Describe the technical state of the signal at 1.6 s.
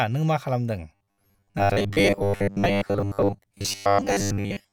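At 1.6 s you're in the middle of robotic sound from repeated short buffers, which kicks in at about 0.95 s, right after "नों मा खालामदों", and runs to the end of the clip. It's a rigid, metallic buzz at 100 Hz that still loosely tracks the speech. The likely cause is the software looping a 10 ms chunk whenever fresh audio doesn't arrive in time, with that happening for most of the stretch.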